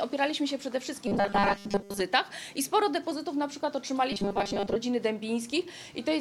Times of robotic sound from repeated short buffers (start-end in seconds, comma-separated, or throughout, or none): 1.07-2.00, 4.12-4.76